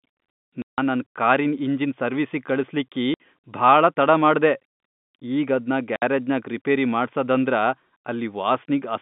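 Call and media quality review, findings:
Packet loss filled with silence. Hard-edged dropouts at 0.62–0.78 s (before "ನನ್ ಕಾರಿನ್"), 3.14–3.18 s (after "ಸರ್ವೀಸಿಗ್ ಕಳಸ್ಲಿಕ್ಕಿ") and 5.96–6.02 s (after "ಈಗ್ ಅದ್ನ"). Receiver inserted silence for missing packets. Gap lengths fit 20 ms packets. G.711 line band-limiting to 3.6 kHz audible throughout.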